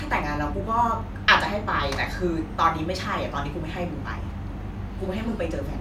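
No technical faults occur at any point in the recording.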